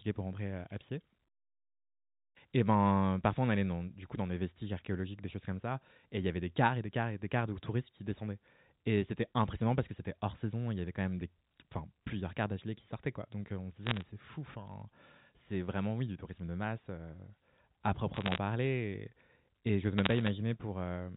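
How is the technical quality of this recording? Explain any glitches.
The speech is carried on a narrowband G.711 A-law telephone channel, capped at 4 kHz with only faint level-following quantisation noise. It has three short bursts of crackle near the end.

Bit errors on a digital phone line occur at 13.85–14.02 s, 18.14–18.38 s and 19.98–20.28 s, at rates of roughly 0.4–0.5 percent. Each flipped bit corrupts a single 8-bit sample. Hits on sign or high-order bits produce sharp ticks, heard as brief crackle over the unaltered speech.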